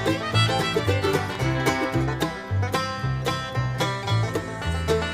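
From 0.64 s to the end, a buzz at 59.94 Hz sits under the sound with hash above it, joined by a thin whine at 15.7 kHz, roughly 20 dB below the signal. This is video or display buzz: a screen or video cable coupling its field and line rates into the audio.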